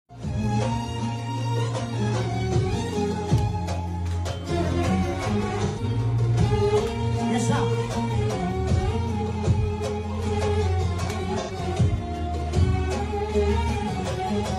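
Two smeared, phasey patches from AAC frame loss with concealment, at 5.64–5.83 s (a gap pointing to about three lost frames) and 11.40–11.52 s (about two), where the decoder re-synthesised the last good spectrum. On a spectrogram each appears as a blurred, horizontally stretched band lacking fine detail, and the waveform loses its normal transient structure there.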